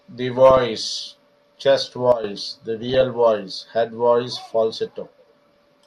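Short blips of noise break over the speech at 0.50 to 0.57 s, 2.83 to 3.01 s and 5.56 to 5.66 s. This is DAB burbling. Weak reception let bit errors slip past error correction into the MP2 data, so corrupted samples put short blips of noise in single sub-bands and corrupted scale factors make sub-bands leap in level for up to a frame.

At 2.12 s the speech and its background noise drop abruptly together by about 12 dB for roughly 0.12 s. This sudden gain jump is likely a digital gain change applied instantly, without any ramp.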